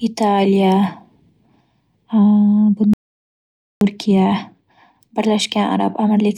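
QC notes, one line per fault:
2.94 to 3.81 s, audio dropout to silence: the speech cuts off mid-flow and returns after about 0.88 s of silence with no room tone, so that stretch of speech is missing. Likely cause is a lost input, with the recorder writing silence meanwhile.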